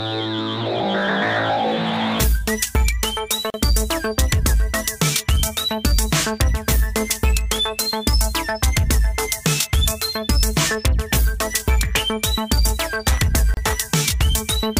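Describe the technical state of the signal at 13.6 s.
A short dropout of about 31 ms, from 13.54 to 13.57 s, cuts into the continuous sound, with smeared edges before the audio resumes where it stopped. This is a gap at a join of encoded pieces: separately encoded segments, here joined every 10 s, were butted together untrimmed, leaving encoder start delay and end padding in place.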